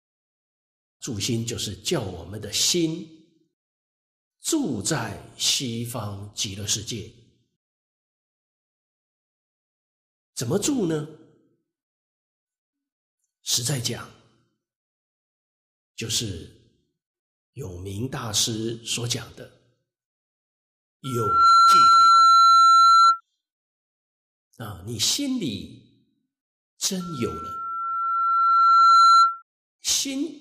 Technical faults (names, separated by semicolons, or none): loudspeaker feedback squeal